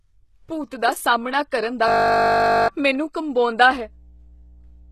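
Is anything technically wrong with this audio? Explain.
Yes, there are three faults.

Throughout the clip the speech is most likely HE-AAC compressed at a low bitrate, around 16 kbps. The codec keeps only the lower spectrum and synthesises the treble by copying lower bands upward, so the top end is plainly damaged and nothing survives above 12.3 kHz.

From 1.88 to 2.68 s, just after "ਦਾ ਸਾਹਮਣਾ ਕਰਨ ਦਾ", there is a system hang loop. The system froze while the audio hardware kept replaying one 20 ms buffer, which repeats 40 times as a steady 50 Hz buzz. About 0.7 s of real audio is lost.

From 3.69 s to the end there is mains hum. Power-line interference, from a ground loop or a nearby transformer, leaks into the signal and is heard as a steady 60 Hz tone, about 25 dB below the speech.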